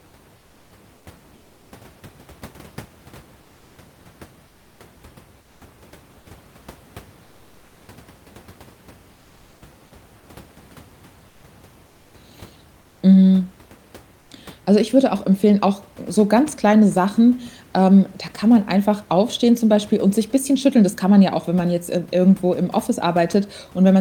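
Discontinuous transmission, likely Opus DTX, stops sending audio during pauses, and the receiver substitutes comfort noise in place of the background at 0.37–1.71, 3.41–5.61, 7.23–7.87, 9.13–9.61, 11.29–11.43, 12.81–13.01 and 14.21–14.29 s. The real room noise flattens into steady, featureless hiss, about 2 to 3 dB quieter in the pauses from 7.23 s on.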